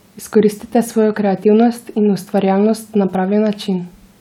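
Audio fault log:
No audible faults detected.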